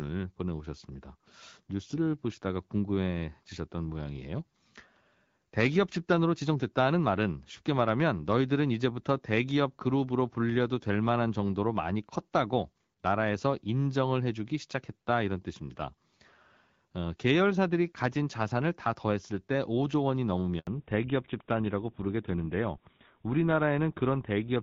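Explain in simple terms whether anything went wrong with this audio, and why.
Two things go wrong near the end, and they happen together.

At 20.59 s there is a handover gap. The call seems to switch from one network to another. For 80 milliseconds no sound gets through. The sound fades out almost at once, and there is a short hole of silence until the new connection picks up at 20.67 s. Anything said in that brief moment is lost for good.

Right after that, from 20.67 s to the end, there is a fallback to narrowband. Before the switch, the call used HD Voice, the AMR wideband codec, which carries a fuller range of sound. After the switch, the phone drops to an older, basic phone codec. Nothing above 4 kHz gets through anymore. The speech sounds duller and more muffled, like an old landline, with a rougher edge.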